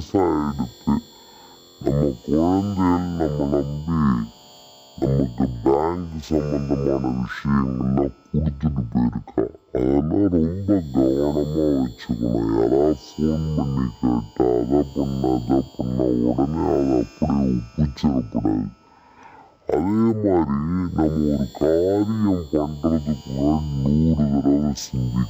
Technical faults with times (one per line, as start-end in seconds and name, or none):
0.00-25.29 stereo read as mono